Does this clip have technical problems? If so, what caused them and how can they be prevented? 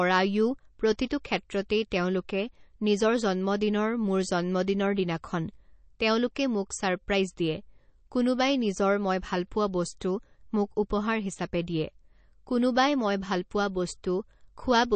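Yes. MP3 compression damage runs through the whole clip: there is nothing above 8.3 kHz, and the speech has a plainly audible watery, swirling texture with chirpy sibilants. The likely cause is an MP3 encode starved of bits, which fits a low bitrate of around 32 kbps. The encoder cut the treble at a fixed point and dropped weaker frequency components, which switch on and off from frame to frame. To prevent it, encode at a much higher bitrate or keep an uncompressed master.

Pre-echo appears at 10.0 s as a short hiss about 12 ms long just ahead of a sharp onset, and the attack itself sounds softened. The transform coder spread its quantisation noise across the whole block, and because the attack fell late in that block, noise sized for the loud part leaked into the quiet moment before it. To prevent it, use a higher bitrate or an encoder whose block switching handles transients well.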